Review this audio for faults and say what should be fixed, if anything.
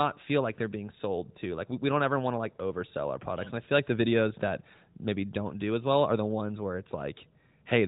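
Nothing needs fixing: no faults are audible, and the speech shows only the band-limited mobile-codec sound of the working AMR narrowband path, with nothing above 3.8 kHz and light coding texture that fits AMR-NB at its 12.2 kbps top rate.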